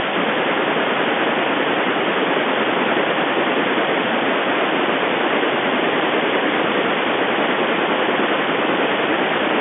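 Speech over a telephone-band line, roughly 250 Hz to 3.5 kHz, consistent with ordinary G.711 telephone coding, with nothing technically wrong in it.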